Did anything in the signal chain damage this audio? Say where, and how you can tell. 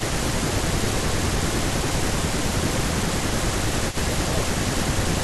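Yes. Speech suppressed in double talk occurs at 0.36–0.77 s, 1.07–2.12 s, 2.4–3.17 s, 3.35–4.02 s, 4.29–4.56 s and from 5.03 s to the end. In each window the speech dips by roughly 10 dB, nearer 15 dB in the 2.4–3.17 s stretch, losing chunks rather than the whole passage. This is call processing. The likely cause is an echo canceller that hears both ends active, cannot tell local speech from loudspeaker echo, and attenuates everything.

Echo leak appears at 3.89–3.97 s as a faint delayed copy of the speech, trailing by 429 ms and sitting about 15 dB below the direct signal. It is also a call-processing fault. The likely source is a far end on speakerphone whose echo canceller failed to remove all of the loudspeaker sound reaching its microphone, so a residue travelled back down the line. The fixed 429 ms lag reflects the round-trip path.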